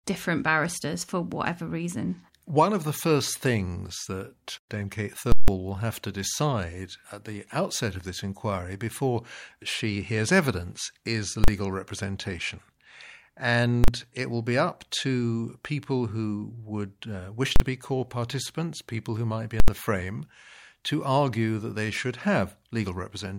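Speech clip with invalid numbers at full scale: a maths step blew up to full-scale values, giving a pop, gap, pop at 5.32–5.48 s and short bangs at 11.44, 13.84, 17.56 and 19.6 s.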